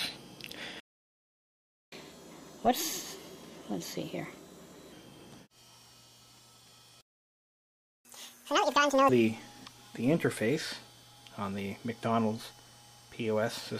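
At 0.80 s the sound cuts out for 1.12 s and again at 7.01 s for 1.04 s. This playback stall, likely the player starving for data, shows as flat silent gaps in the waveform and blank columns on the spectrogram. Catch-up at higher speed follows each gap: 1.25x from 1.92 to 4.92 s, raising pitch roughly four semitones, then 2x from 8.05 to 9.09 s, about ten semitones higher. On the spectrogram, harmonics shift upward and the waveform looks compressed in time.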